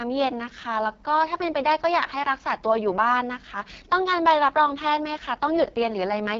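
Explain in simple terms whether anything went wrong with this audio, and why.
The whole clip carries heavy damage from the AMR wideband (HD Voice) codec used for phone calls. Running at one of its lowest settings, it rebuilds speech from a simplified model, leaving a rough, raspy edge, and nothing remains above about 7.2 kHz.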